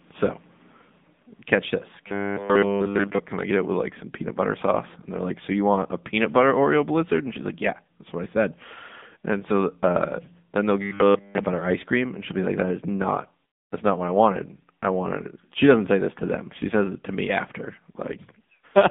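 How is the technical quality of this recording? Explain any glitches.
The recording is narrowband and noticeably degraded, with two short robotic glitches.

Throughout, the speech sounds thin, buzzy and synthetic, with nothing above 3.8 kHz and a telephone-like band of roughly 150 Hz to 3.7 kHz. This is the AMR narrowband mobile codec. It rebuilds the voice from a vocal-tract model fed by a few pulses per short sub-frame. The plainly audible artificiality points to a low bitrate, around 8 kbps.

From 2.08 to 3.19 s, after "catch this" and before "can I get it", and again from 10.82 to 11.46 s, after "so uh then they'll" and before "ice cream and she'll", the speech becomes a rigid metallic buzz at 100 Hz. The buzz still loosely follows the speech. This is robotic sound from repeated short buffers. The likely cause is audio arriving too late, so the player loops the last 10 ms or so and skips nearly all of the real signal in those spans.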